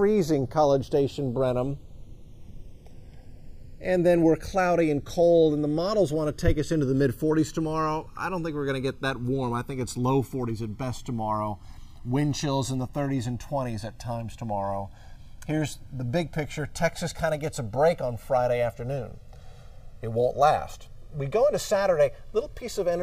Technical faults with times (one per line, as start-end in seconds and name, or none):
0.00-23.02 channels drifting apart